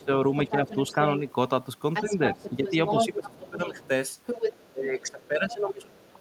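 From 0.0 to 1.21 s the speech dips by about 10 dB in short stretches, while a faint second voice sits underneath until 1.33 s: speech suppressed in double talk, likely an echo canceller ducking both talkers at once, plus the other side's voice leaking through, likely loudspeaker echo left in the microphone. From 1.94 s to the end that leaked voice returns much louder, close to the talker's level, and the suppression recurs from 2.01 to 3.79 s at about 10 dB and from 4.7 to 5.94 s, where the speech drops by about 20 dB.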